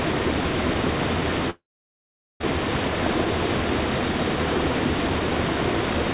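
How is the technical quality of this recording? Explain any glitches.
The recording of sounds has one clear glitch, and it comes through a narrowband call path with nothing above 4 kHz, which fits G.711 mu-law at 64 kbps.

Long network dropout, 1.5 to 2.42 s: incoming audio likely stopped arriving. The receiver stretched the last sound into a fading buzz or hiss, then left about 0.78 s of silence. When the sound resumes, roughly 0.9 s of the original is simply missing.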